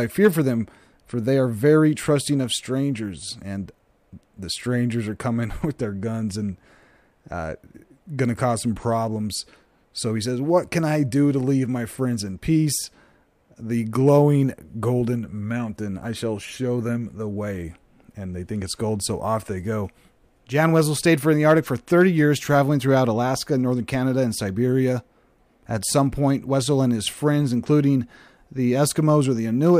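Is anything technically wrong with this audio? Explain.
Yes. Clock slip clicks run from 0.16 s to 29.75 s. They come roughly every 0.07 s, a faint steady rattle on louder passages. The likely cause is two free-running clocks differing by a few hundred ppm, each slip dropping or repeating one sample. Unlike buffer dropouts, they are evenly spaced and leave no gaps.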